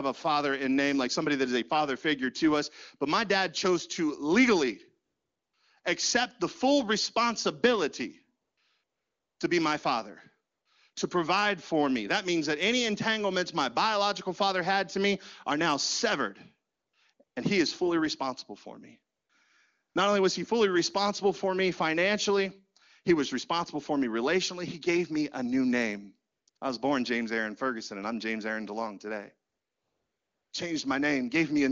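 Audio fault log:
5.05 to 30.51 s, AMR comfort noise: fifteen pauses between 20 ms and about 1.02 s long, the first after "dad chose to legally" and before "accept the full responsibility", the longest at 29.49 to 30.51 s. The phone treated these gaps as silence and stopped sending speech frames, so the receiver filled them with smooth synthetic hiss in place of the real room sound. Unlike a dropout, the gaps never fall to dead silence, and unlike a noise gate, the noise floor remains.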